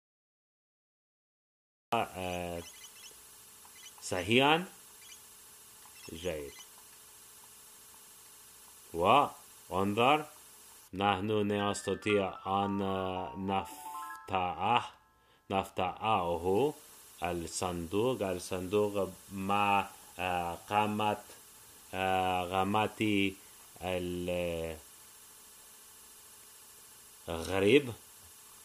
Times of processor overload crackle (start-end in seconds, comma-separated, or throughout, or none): none